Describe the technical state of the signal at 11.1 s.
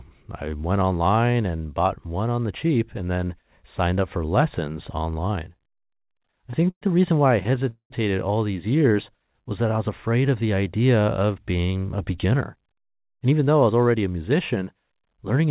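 At 11.1 s the signal is intact, with no fault present, only the narrow band of the call path, nothing above 4 kHz, as heard throughout the G.711 A-law connection.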